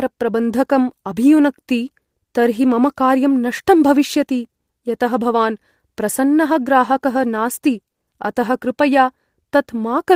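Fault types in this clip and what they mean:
No audible faults detected.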